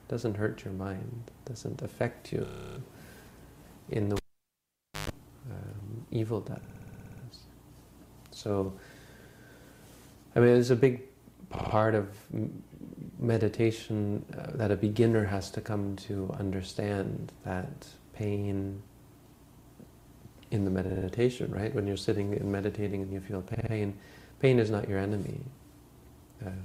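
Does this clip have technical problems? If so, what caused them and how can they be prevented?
Yes, there are two kinds of fault.

Repeated frames occur at 2.44–2.78 s, 6.63–7.23 s, 11.55–11.74 s, 20.89–21.07 s and 23.54–23.72 s. The same short slice loops: a 30 ms block replays 11 extra times at the first, a 60 ms block 10 extra times at the second, and 60 ms blocks replay 3 extra times at the last three. It stutters, and the audio gets longer by 0.33 s, 0.6 s, then 0.18 s each. Unlike a dropout, nothing is missing; identical material recurs. Writing or streaming through a buffer that never resends already-delivered frames prevents this.

A cable pulled and plugged in accounts for 4.16–5.10 s. A pop cuts the sound to near silence for about 0.88 s, then about 0.13 s of 50 Hz mains buzz comes as the plug tip makes partial contact, and a second pop brings the sound back. The pops and hum mark a physical disconnection rather than a digital gap, which would be clean. 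Securing cables and muting the input before touching connectors prevents it.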